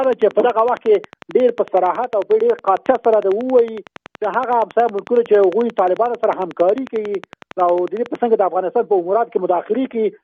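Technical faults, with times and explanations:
0.04 to 8.16 s, train of clicks: A steady ticking runs over the sound at 11 clicks per second. The spacing is regular, and every click has much the same shape. There are around a hundred in all. They poke out a few dB above the audio and carry on through quieter moments. The cause is likely a repeating electrical pulse, such as interference from nearby equipment or a faulty connection or power supply. It stops well before the end.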